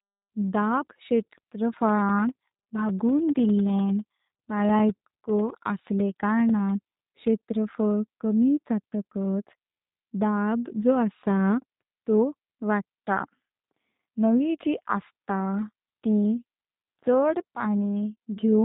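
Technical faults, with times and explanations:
Throughout: G.729 codec. The speech carries the rough, slightly synthetic texture of a low-rate CELP coder, and nothing above about 3.8 kHz remains, which fits 8 kbit/s G.729. Each 10 ms frame is rebuilt from a vocal tract filter, a pitch predictor and a handful of pulses, so fine detail is replaced by a modelled approximation. Unlike a plain low-pass filter, the buzzy, processed character persists even within the band that survives.
1.79 to 6.99 s: periodic USB or driver dropouts. Evenly spaced ticks repeat every 0.1 s, about fifty in all. Each is a gap of around a millisecond that is filled with silence. This points to a background task briefly blocking the audio path on a fixed schedule. The strict regular spacing and the tiny length of each gap separate this from random packet loss or a loose connection, which produce irregular and usually longer interruptions.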